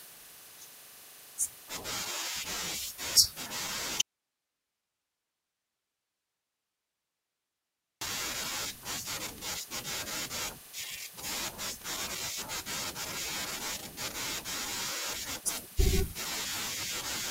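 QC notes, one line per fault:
4.01 to 8.01 s, audio dropout to a faint residue: the speech cuts off abruptly mid-flow and returns just as suddenly about 4.0 s later, with nothing in between but steady hiss sitting roughly 55 dB below the normal level. The hard edges on both sides rule out a natural pause or a fade. The likely cause is the wanted signal being lost upstream while the path after the break stayed live, passing only its own noise floor.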